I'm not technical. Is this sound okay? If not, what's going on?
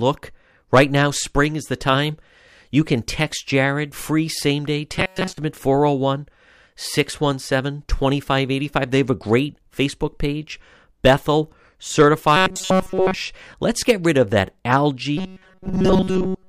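No. There is robotic sound from repeated short buffers. At 4.96 to 5.38 s (after "free same day"), at 12.37 to 13.17 s (just before "let's get rid of"), and from 15.17 s to the end, the speech becomes a flat, metallic buzz at 188 Hz. The likely cause is audio arriving too late, so a roughly 5 ms scrap is looped in place of the missing sound. Unlike a dropout, the sound never goes silent.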